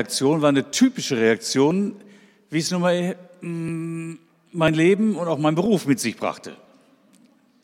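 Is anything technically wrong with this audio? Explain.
Yes. Overlap between stream segments causes tiny skips at 0.72, 1.71, 2.69 to 2.71, 3.68, 4.68 and 5.66 s. Roughly once per second, overlapping 1.0 s segments get trimmed, dropping milliseconds of sound. This leaves a waveform discontinuity, seen as thin vertical broadband spectrogram lines.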